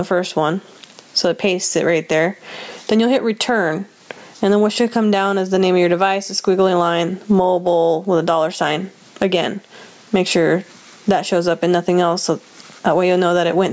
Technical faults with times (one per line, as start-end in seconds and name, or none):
0.00-13.72 gain pumping